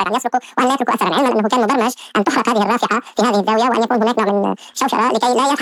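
Audio read two samples at a time (double speed) runs throughout: the reader treated each pair of samples as a single frame, as if the stream had two channels or twice-wide samples. Everything plays twice as fast and 12 semitones higher.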